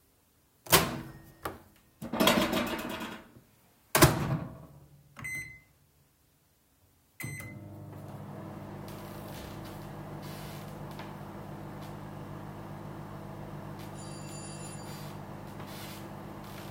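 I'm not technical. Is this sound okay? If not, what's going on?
Yes, this one's fine; nothing in the sound is glitching, cutting out or breaking up, so there's nothing here to worry about.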